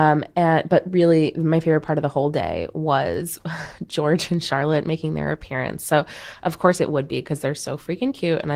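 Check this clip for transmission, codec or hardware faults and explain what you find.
Two linked faults stem from a timing mismatch across the link.

Clock drift between sender and receiver runs through the whole clip. The sender's clock runs roughly 4 percent fast, so the receiver's jitter buffer keeps overfilling. To stay in step, the receiver must keep discarding short stretches of speech, which sounds like small, irregular timing stumbles.

Repeated timing corrections run from 0.11 s to 8.55 s. The receiver trims short pieces, all in the same direction, which pushes effective playback to 104 percent speed. The cuts are small and unevenly spaced, so the speech has a slightly hurried, unsteady tempo with faint hiccups.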